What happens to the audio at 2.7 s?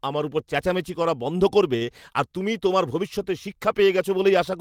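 Nothing goes wrong at 2.7 s; the speech carries on intact through that moment, with no dropout, click or distortion.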